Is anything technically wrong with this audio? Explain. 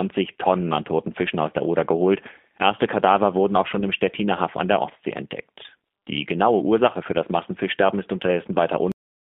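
Yes, two faults. Throughout, the speech sounds narrow and boxy, with nothing below about 200 Hz or above about 3.6 kHz, and it carries a plainly audible rough, slightly synthetic edge. This is G.729 codec damage, consistent with the low-rate G.729A variant at around 8 kbit/s. The codec does not send the waveform itself. It sends a vocal-tract filter, a pitch prediction and a few pulses per short frame, and the decoder rebuilds speech from that model. The rebuilt speech is intelligible, but detail is lost and the tone turns coarse.

At 8.92 s the speech stops abruptly in the middle of a sound and drops straight to dead digital silence for the last 0.31 s, with no natural decay. This is a cut-off end. The final stretch of audio buffers was never written or played out, so the signal simply ends where the data runs out. Anything after that point, including the tail of the last sound, is missing.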